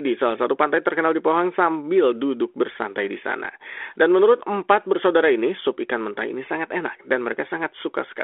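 Nothing in this speech recording points to a technical fault. It passes through a G.726 ADPCM path at 32 kbit/s, which confines it to the telephone band of about 300 Hz to 3.5 kHz and leaves only light coding grain that follows the level of the speech.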